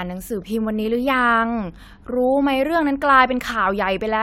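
No technical faults can be heard anywhere in the recording.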